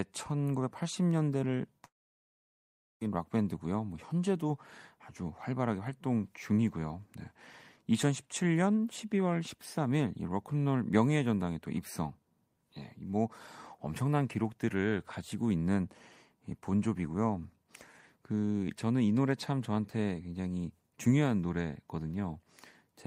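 From 1.85 to 3.03 s, a fading buzz gives way to 1.1 s of silence, likely a long network dropout, longer than a packet glitch.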